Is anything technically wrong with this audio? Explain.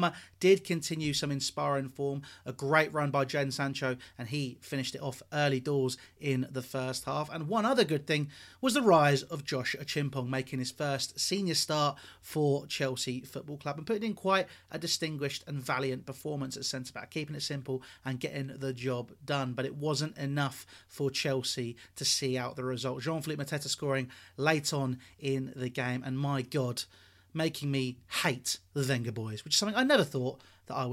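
No, nothing stood out as technically wrong on listening.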